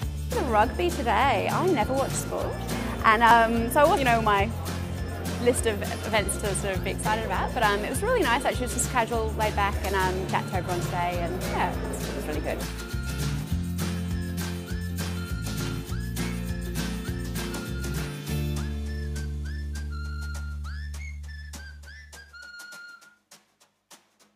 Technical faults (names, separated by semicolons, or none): damaged data in a compressed stream